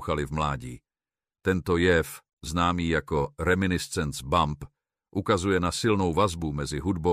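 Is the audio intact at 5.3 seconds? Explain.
Yes, at 5.3 seconds the speech plays through cleanly, with no dropout, click, distortion or other fault to be heard at that moment.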